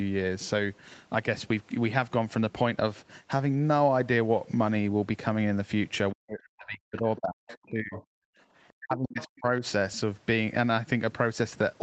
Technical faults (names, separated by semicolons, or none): speech suppressed in double talk; other side's voice leaking through; background gated by the echo canceller